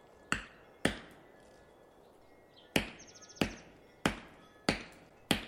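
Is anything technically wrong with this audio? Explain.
Yes. Damaged data in a compressed stream occurs at 0.43–0.49 s, 2.71–2.75 s and 5.06–5.11 s. Corrupted bytes make the decoder misread those frames and lose sync until it finds the next frame header, producing a brief chirp, squawk, click or short hole each time.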